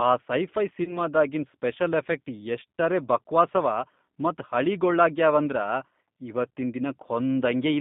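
The whole clip carries the G.729 codec. The line passes only from 150 Hz to 3.6 kHz, so the speech sounds thin and boxed in. The coder rebuilds each 10 ms frame from a vocal tract filter, a pitch predictor and a few pulses, and the sound fits an 8 kbit/s stream. That rebuilding is plainly audible. Voices turn slightly rough and synthetic.

At 0.84 s, just after "ಆ ಸೈಫೈ", comes VoIP packet loss concealed by the speech codec. About 30 ms of audio went missing, which fits one lost packet. The decoder filled the gap by repeating its last pitch and filter and lowering the gain. That gives a short stretched, fading stretch of sound. The damage lasts until about 0.98 s, past the gap itself, because each frame builds on the last. Speech resumes with "ಸ್ಪೆಷಲ್ ಎಫಕ್ಟ್ ಎಷ್ಟರೇ ಬಕ್ವಾಸವ".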